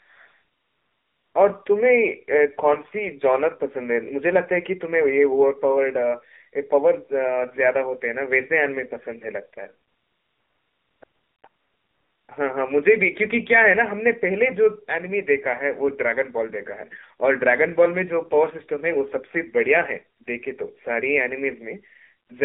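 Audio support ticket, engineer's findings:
AMR narrowband mobile codec, whole clip: speech band-limited to about 250 Hz–3.6 kHz, nothing above. Plainly audible buzzy, synthetic vocal tone from the pulse-excited vocal-tract model. The damage level fits the low 7.4 kbps AMR-NB mode.

AMR comfort noise: steady, smooth synthetic noise switching in where speech frames stop, replacing the real background. It appears at 0.00–1.34 s, 9.88–11.02 s, 11.04–11.44 s, 11.48–12.28 s, 20.18–20.20 s, 20.24–20.26 s and 22.28–22.30 s. The brief 20 ms switches can clip quiet word endings.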